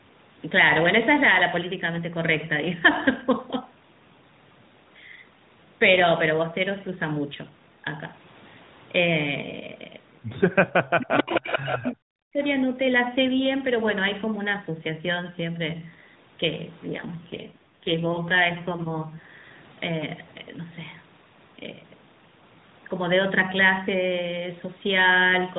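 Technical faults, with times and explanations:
10.82–12.42 s, speech suppressed in double talk: the speech dips by about 40 dB, about a second affected, likely from an echo canceller that could not separate its own talker from the loudspeaker echo and turned both down.
11.18–11.92 s, echo leak: a delayed copy of the speech, about 5 dB below it, trails 434 ms behind, likely echo not fully removed from a loudspeaker's microphone.
16.86–19.19 s, AMR rate drop: the speech turns rougher and more synthetic with no gap, as the codec falls from 12.2 to 5.9 kbps for error protection.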